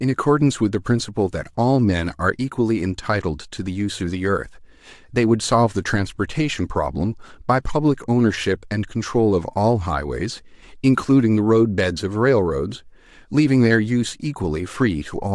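From start to finish the speech has a breathy, grainy edge, with the top end sounding smeared and hissy rather than crisp. That's plainly audible codec damage, most likely from Bluetooth LC3 compression, the transform codec behind LE Audio. It works in very short frames and, when bits run low, zeroes much of the upper spectrum and papers over it with shaped noise. The texture here fits 7.5 ms frames at around 48 kbps.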